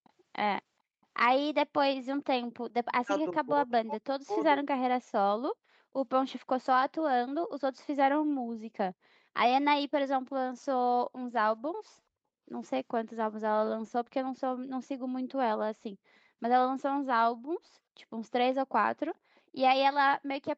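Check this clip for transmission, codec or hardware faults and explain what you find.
Two kinds of fault are present: a faint echo leak at the very start and end, and a stretch where the speech is pushed down during double talk. The band stopping at 8 kHz matches the ordinary call processing and codec path.

Echo leak, 0.04 to 0.1 s and 19.35 to 19.4 s: the far side's echo canceller likely failed to fully subtract what its microphone picked up from its loudspeaker, so a scrap of the speech returns about 432 ms late. Both slips are brief and very quiet, roughly 35 to 40 dB below the speech.

Speech suppressed in double talk, 3.03 to 4.77 s: with both sides talking at once, the echo canceller likely could not tell its own talker from the loudspeaker echo and attenuated everything. In this window the speech dips and breaks up in pieces, with the deepest cuts reaching around 40 dB down. Affected moments add up to about one and a half seconds, so the talker seems to fade in and out.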